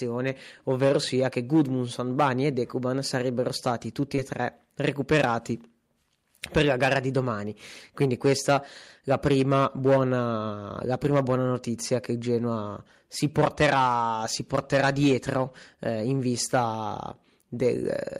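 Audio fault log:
4.15–4.20 s, short concealed packet loss: about 20 ms of the speech never reached the decoder in time, and the receiver filled the gap by extending the preceding sound, carrying its pitch forward if voiced or substituting shaped noise if not, then crossfading back into the real signal. The patch spans roughly 40 ms including the blend, heard as a brief smear or wobble where a short consonant may drop out.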